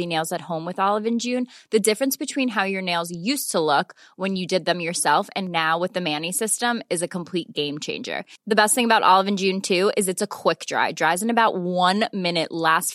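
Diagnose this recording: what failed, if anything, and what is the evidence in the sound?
Nothing failed in this recording, and the sound gives no evidence of a fault at any stage.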